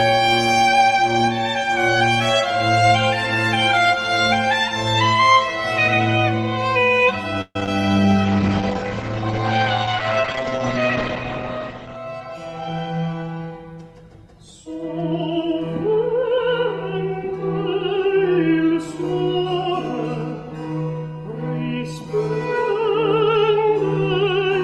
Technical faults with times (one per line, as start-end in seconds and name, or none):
7.41-7.68 repeated packet loss (robotic sound)
8.25-12.02 call bitrate drop
11.97-13.14 jitter buffer speed-up